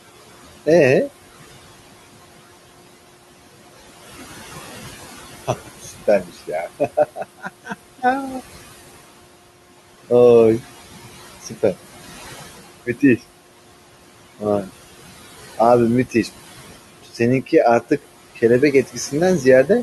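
Noise suppressor artifacts run through the whole recording. The suppressor pulls the room noise down by about 16 dB between phrases, and that noise, sitting about 16 dB under the speech, rises again beneath it. Unlike a plain noisy room, the background pumps in step with the speech.

Speech cut by the noise suppressor occurs at 5.48–6.5 s, 7.16–7.74 s, 12.86–13.2 s, 17.03–17.2 s and 18.87–19.13 s, dropping the speech itself by about 15, 17, 15, 16 and 11 dB. The affected sounds fade into the background rather than breaking off as they would in a dropout.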